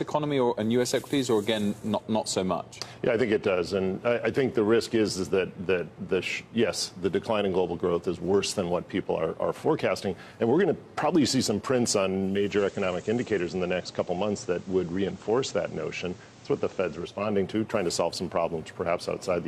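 At 12.1 s, digital radio blends to analogue FM over about half a second. Hiss rises and level dips slightly. Digital returns at 17.4 s.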